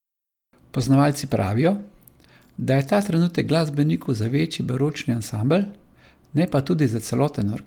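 A speech clip with a lost packet rebuilt from error correction at 1.79 s and 4.87–4.89 s. Each 20 ms patch is a rougher, noisier decoded copy with no waveform gap, showing as a brief smeared spectrogram slice.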